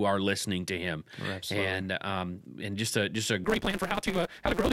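A speech clip with a block size mismatch (truncated) from 3.44 s, just after "just a just a", to the end at 4.72 s. One stage writes longer blocks than the next one takes in, so the tail of every block is dropped. Each cut lands at a steady rate, giving a 172 Hz buzz. The speech also runs about 1.88 times too fast, yet its timbre stays. That buzz rate fits 256-sample reads.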